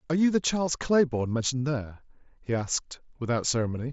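At 0.66 s and again at 2.60 s, concealed Bluetooth headset packet loss occurs. Each gap points to one lost voice packet, about 7.5 ms. The receiver fills it by repeating a matching stretch of recent waveform. Both are nearly hidden, through the mSBC headset link.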